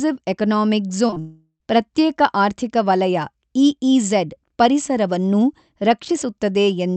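At 1.07, 1.11 and 1.14 s, three short concealed packet losses run back to back, each about 20 ms of speech that arrived too late. The receiver extended the preceding sound to cover each gap. The result is a quick wobbly smear.

From 1.20 to 1.62 s comes a long network dropout, likely a stall in the network. About 0.4 s of audio is lost. The last sound is stretched into a fading buzz, then near-silence for the final 70 ms before speech resumes further on.

The call path itself is audible as a treble limit near 8 kHz, which fits Opus at 64 kbps.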